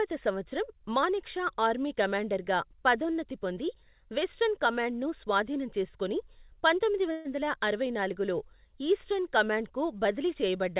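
Speech clip carried over a narrowband call path, with nothing above 4 kHz, which fits G.711 mu-law coding. At 7.12 s a call audio freeze fills about 128 ms with a decaying buzz or hiss. The likely cause is late packets draining the jitter buffer. Nothing is lost, but everything after is delayed by 128 ms.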